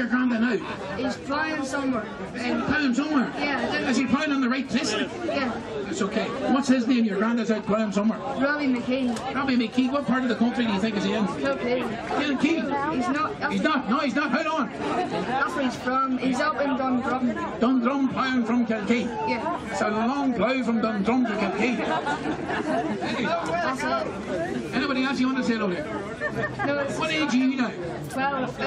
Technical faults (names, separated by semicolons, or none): none